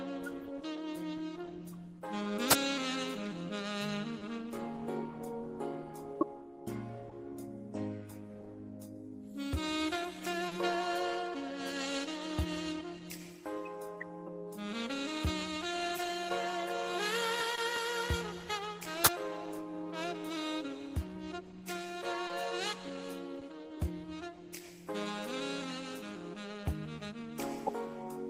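Short concealed packet loss occurs at 4.19, 7.09, 10.47, 17.55, 22.27 and 23.39 s. About 20 ms went missing each time, 40 ms at 10.47 s. The receiver extended the preceding sound, leaving brief smears or wobbles.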